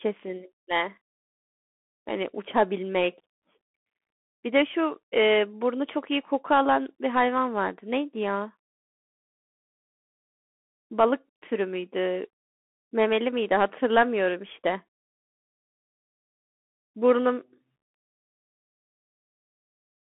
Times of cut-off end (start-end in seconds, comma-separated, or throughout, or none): none